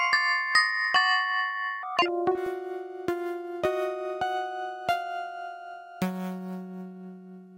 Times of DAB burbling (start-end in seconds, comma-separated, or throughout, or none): 2.46, 4.39-4.47